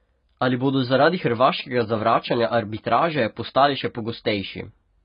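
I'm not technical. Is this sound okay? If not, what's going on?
No, it isn't quite right. There are two separate problems.

First, the whole clip sounds dull and watery. Nothing is left above about 5.1 kHz, so the crisp top of the speech is gone, and the hiss-like sounds have a fizzy, swirling texture. That most likely comes from AAC compression squeezed down hard to save space. A muffled microphone would just sound dull. This also warbles.

Second, from 0.65 s to 3.88 s there's a quiet buzz sitting under the speech. It comes in a stuttering dit-dit-dit rhythm with a buzzy tone repeating about 217 times a second. These are GSM signalling bursts, interference from a nearby 2G mobile phone talking to its network. The audio wiring picks up the phone's radio pulses and turns them into sound. Ordinary mains hum stays steady, but this arrives in galloping bursts and then stops.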